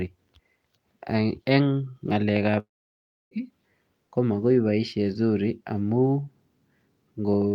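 A long network dropout runs from 2.59 to 3.34 s in this speech. The sound cuts off, the last moment is stretched into a brief fading buzz, and then about 0.65 s of near silence follows before the speech resumes mid-flow with roughly 0.72 s of material simply gone. The likely cause is a run of audio that never reached the receiver, which could only prolong what it last had and then fall quiet.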